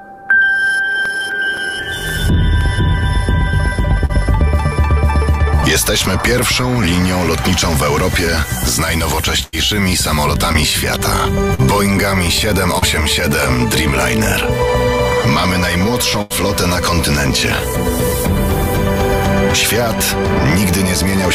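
From 1.05 to 2.61 s, CD scratch ticks: seven brief clicks, the longest about 3 ms, where a surface blemish exceeded error correction once per disc revolution and the player patched the damaged samples. At 4.05 s, short concealed packet loss: about 40 ms of audio arrived too late, and the receiver extended the preceding sound, leaving a brief smear. At 9.43 s, a burst of packet loss: about 100 ms is missing, heard as the last sound held and fading before the audio jumps ahead. Further short concealed packet losses at 10.53 s (20 ms), 11.54 s (40 ms) and 12.78 s (40 ms) each produce a quick wobble. At 16.22 s, a second burst of packet loss drops about 80 ms in the same way.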